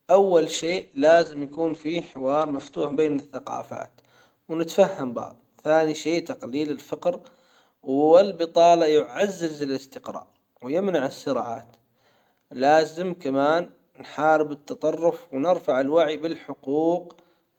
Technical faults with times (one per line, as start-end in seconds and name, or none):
0.55-3.31 call bitrate drop